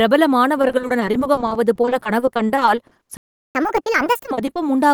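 From 0.61 s to 4.57 s the speech suffers repeated packet loss with a robotic sound: 51 short gaps, the longest 60 ms, each patched by stretching the previous sound, so about 30% of that span is synthetic. On a spectrogram, harmonics smear into flat, repeated slices.

At 3.17 s a playback stall cuts the output to silence for 0.38 s, until 3.55 s, likely because the player ran dry or its thread was blocked. The waveform shows a flat line, and the spectrogram shows a blank vertical band.

From 3.55 s to 4.31 s comes catch-up at higher speed. The backlog is resampled at 1.5x, so the speech rushes and rises about seven semitones before settling back. On a spectrogram, harmonics shift upward and compress in time, and syllables in the waveform crowd closer together.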